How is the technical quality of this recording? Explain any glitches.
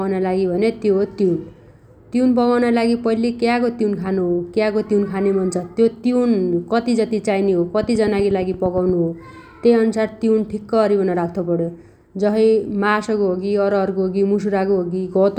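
There is one clear glitch, a train of clicks, from 7.83 to 8.90 s. About ten sharp clicks arrive evenly, roughly 8.5 per second. Each has the same shape and peaks a little above the speech. Likely cause: interference or a faltering interface injecting repeated pulses. It sounds like steady ticking laid over the speech.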